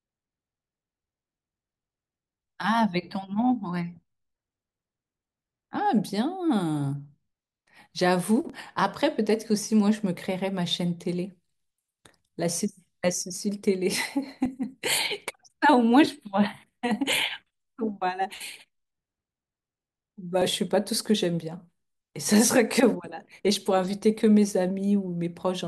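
A likely chunked recording process drops about 20 ms of audio at the seam between chunks, splicing the speech straight together. The result is brief skips at 8.50, 14.46, 20.42 and 23.40 s, spaced at multiples of 3 s: audio missing between chunks.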